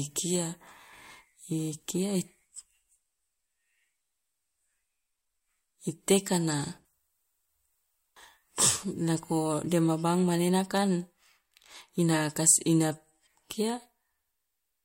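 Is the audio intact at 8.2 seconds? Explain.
No. At 8.15 s a stream segment skipped: one segment of the segmented stream likely failed to load, so the player carried straight on with the next one. The speech lurches forward with a small blip, and a piece of the programme is simply gone.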